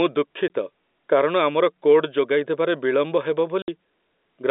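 At 0.48 to 0.50 s and again at 3.62 to 3.68 s, the speech stream suffers packet loss filled with silence. Audio packets never reached the receiver, and it inserted dead air instead of concealing the gap. The first hole lasts 20 ms and the second 60 ms, which fits one and then three consecutive 20 ms packets. Each dropout abruptly chops the speech, leaving hard edges in the band-limited G.711 telephone sound.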